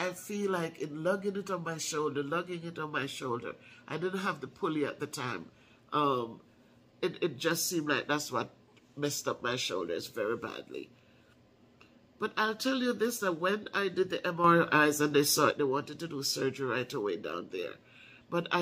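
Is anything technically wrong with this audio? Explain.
Yes. A sudden gain jump runs from 14.44 to 15.51 s. The sound and its background noise step up together by about 6 dB, likely from a digital gain change applied without a ramp.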